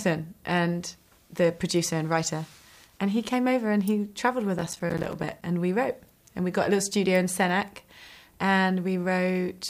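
From 4.59 to 5.42 s there is processor overload crackle. The processor repeatedly misses its deadlines for buffers of roughly 5 ms, around thirty of them, and each miss drops in a short hard-edged silence. The gaps pile up into a gritty tearing crackle over the sound, which clears once the load passes.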